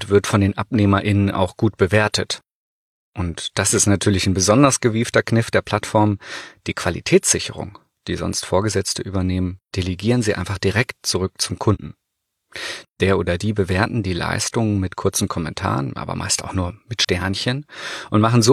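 At 11.71 s, just after "einfach direkt zurück zum", the speech lurches forward, and again at 17.0 s after "meist auch nur mit". These are compressed frames skipped: roughly 100 ms, then 50 ms, never decoded, jumps that fit whole frames of about 46 ms.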